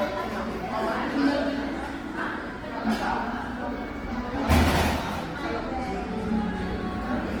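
From start to finish the sound is coarse and grainy, with tonal parts turning rough and noisy rather than swirling. This is Opus compression, likely in its CELT music mode at a low rate, which fits roughly 16 kbps. Starved of bits, the encoder keeps each band's energy but refills the detail with folded or noise-like content. A spectrogram shows the full band filled up to about 20.2 kHz with few holes, but with smeared, speckled texture where clean structure should be.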